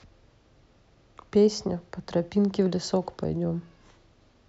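No technical faults can be heard anywhere in the recording; the signal holds steady throughout.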